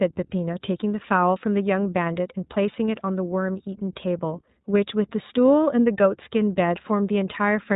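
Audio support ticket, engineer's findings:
Speech band-limited to 4 kHz, rough and slightly synthetic, whole clip. Likely component: iLBC codec, framing fits 20 ms (15.2 kbps mode). Each frame's excitation coded independently, hence grainy texture. Unlike a simple low-pass, damage is plainly audible beyond dullness.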